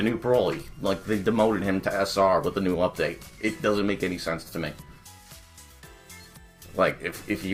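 Throughout the clip there is a faint, uneven unsteadiness in tempo, as if the sound keeps catching for an instant and then carrying on. This is clock drift between sender and receiver: the sender's audio clock runs roughly 3 percent slow relative to the receiver's, so samples arrive a little too slowly and the jitter buffer steadily drains rather than holding a stable level, leaving the playback side short of material.

From 0.20 s to 7.33 s, small hiccups recur at irregular spacing, each one a brief stretch where a short piece seems to play twice. These are repeated timing corrections. To avoid running dry, the receiver keeps repeating short fragments, always in the same direction, so the audio plays at about 97 percent of its proper speed. Altogether the repeats add something like a fifth of a second to the stretch.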